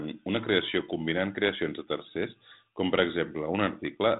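Nothing stood out on listening to this speech.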